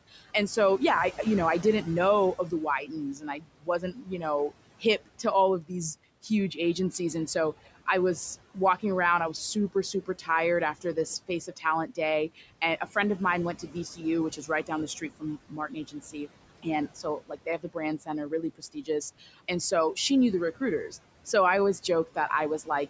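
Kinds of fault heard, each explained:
Noise suppressor artifacts: Across the whole clip the suppressor pulls steady background down by about 18 dB, frame by frame, so the room noise sinks in pauses and swells back under the speech. Unlike plain room noise, its level follows the speech.
Speech cut by the noise suppressor: The suppressor mistakes quiet parts of the speech for noise and lowers them by up to about 19 dB. Syllables sound swallowed after "I didn't know of", after "walking around I was", before "of mine went", and from 13.59 to 19.97 s. Here the speech itself fades, not just the background.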